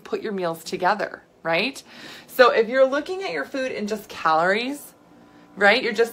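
No faults detected anywhere in the clip.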